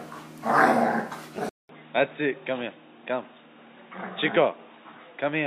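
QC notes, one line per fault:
1.49 s to the end, input switched to a poorer device: after a short gap of about 200 ms, the sound goes dull and boxy, with nothing above 3.8 kHz. It's also about 5 dB quieter, and a new low background noise, roughly 45 dB under the signal, sits beneath it from there on. Likely the recording jumped to another mic or a headset's call profile, whose narrower band, different gain and own noise floor give that muffled, flatter character.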